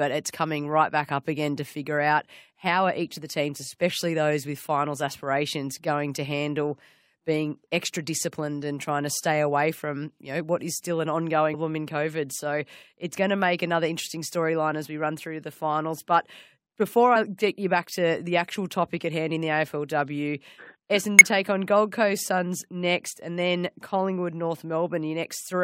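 Damaged data in a compressed stream disrupts this speech clip at 11.53 s, 17.15 s and 21.19 to 21.21 s: corrupted bytes make the decoder misread frames and resynchronise, producing brief glitches.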